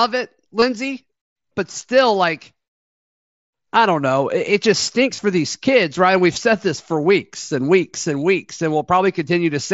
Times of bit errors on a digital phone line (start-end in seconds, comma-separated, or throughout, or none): none